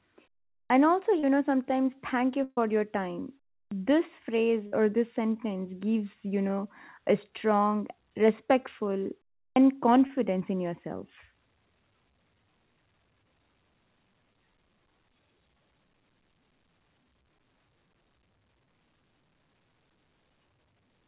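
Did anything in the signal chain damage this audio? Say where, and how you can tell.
Yes. Playback stage: clipped start after a pause at 0.66, 3.68 and 9.52 s. Roughly 40 ms of each onset vanishes as the sleeping output device wakes.

Network stage: short concealed packet loss at 1.19, 6.48, 10.07, 14.33 and 18.66 s. Brief 10 to 40 ms smears or wobbles where the receiver patched missing audio.

Network stage: burst of packet loss at 2.44 s, 130 ms, and 4.67 s, 50 ms. Concealment holds then fades the last sound, and the audio resumes with that stretch missing.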